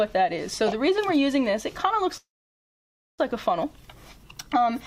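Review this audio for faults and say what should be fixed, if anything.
A call audio freeze runs from 2.17 to 3.20 s. The sound trails off as a short fading continuation, then goes silent for about 0.94 s before resuming exactly where it stopped. Nothing is skipped. About a second of delay is inserted instead, which distinguishes it from a dropout, where audio is lost. The likely cause is delayed packets emptying the jitter buffer. A more stable network path or a deeper adaptive jitter buffer would prevent it.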